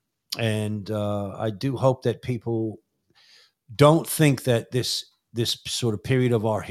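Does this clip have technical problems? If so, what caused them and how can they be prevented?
Yes. At 5.50 s, just after "don't think that this", an overlap between stream segments occurred: two segments' timestamps overlapped, and the player trimmed the overlap from audio that wasn't actually duplicated. A few milliseconds of speech vanish, and the waveform jumps, heard as a tiny skip. Preventing it means packaging segments with exact, non-overlapping timestamps and having the player trim only samples that genuinely repeat.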